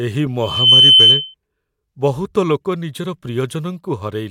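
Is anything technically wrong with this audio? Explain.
Yes. A microphone is picking up the loudspeaker it feeds, and at about 3.1 kHz the loop gain climbs past one. That is loudspeaker feedback squeal, from 0.42 to 1.34 s. Each trip around the loop reinforces that one frequency, so a pure tone swells out of the speech over roughly a third of a second. It then holds as a piercing whistle, something like 15 dB above the speech.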